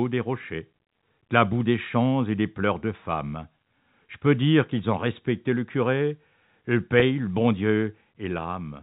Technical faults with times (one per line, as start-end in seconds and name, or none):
7.00-7.02 packet loss with pitch repetition